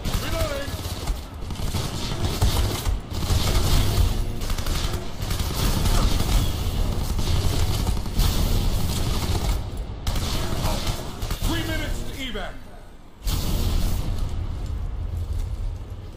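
No technical faults can be heard anywhere in the signal, with no interruptions, level problems or other defects at any point.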